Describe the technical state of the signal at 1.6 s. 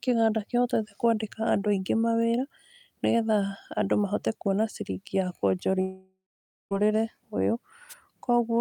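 The speech at 1.6 s is intact, with no audible dropout, distortion or other fault at that point.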